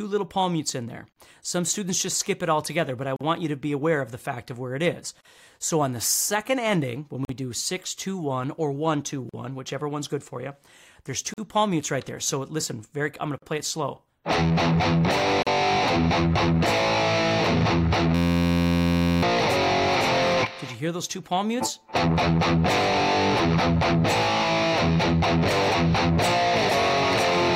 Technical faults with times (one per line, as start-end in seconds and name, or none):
1.12-1.16 gap at a join of encoded pieces
3.16-3.21 gap at a join of encoded pieces
5.21-5.25 gap at a join of encoded pieces
7.25-7.29 gap at a join of encoded pieces
9.29-9.34 gap at a join of encoded pieces
11.34-11.38 gap at a join of encoded pieces
13.38-13.42 gap at a join of encoded pieces
15.42-15.47 gap at a join of encoded pieces
18.15-19.23 system hang loop